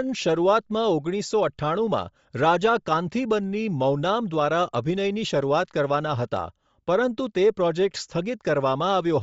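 Bluetooth LC3 compression runs throughout the speech: the upper spectrum sounds thinned and replaced by noise fill, giving a plainly audible breathy, grainy edge. This likely comes from the LE Audio transform codec at a low rate, which fits roughly 32 kbps with 7.5 ms frames.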